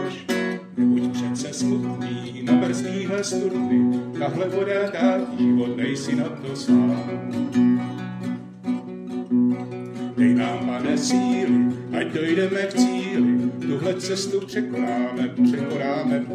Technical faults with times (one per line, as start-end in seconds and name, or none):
none